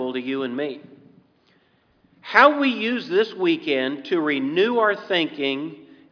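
No technical faults can be heard anywhere in the recording, and the signal stays steady and intact throughout.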